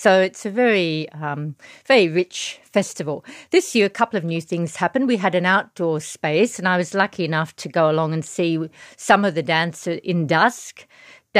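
Listening closely to the speech, nothing stood out as a technical problem at any point.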